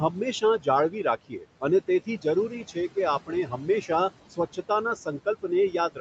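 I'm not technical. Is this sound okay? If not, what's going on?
No, not quite. There are two related problems, both from the noise suppressor on the call.

The first is noise suppressor artifacts, and they run through the whole clip. The suppressor keeps judging, moment by moment, what counts as steady background noise and pushing it down hard. So the room noise ducks away in the gaps and creeps back under the talking.

The second is speech cut by the noise suppressor. Between 0.12 and 3.9 s it mistakes bits of the voice for noise and turns them down with the background, adding up to somewhere under a second in all. It happens again from 4.3 s to the end at 6.0 s. Those moments sound swallowed or suddenly faint, especially quiet consonants and the ends of words.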